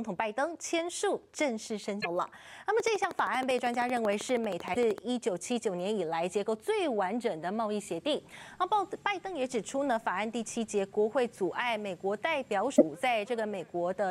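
At 1.97 to 2.06 s, damaged data in a compressed stream makes the decoder lose sync, a brief fault that shows as a smeared broadband smudge on a spectrogram. From 2.8 to 4.99 s a train of clicks ticks regularly at 12.8 per second, roughly thirty sharp spikes standing well above the sound, about 10 dB, visible as evenly spaced vertical lines. Interference from nearby equipment is the likely cause. The same stream damage recurs at 4.72 to 4.77 s, inside the ticking, and again at 12.74 to 12.82 s, each a short disruption with a visible discontinuity in the waveform.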